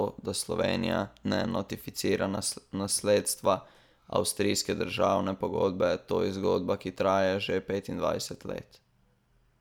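No technical faults can be heard anywhere in this speech recording. There is nothing to time or describe, since no fault occurs at any point.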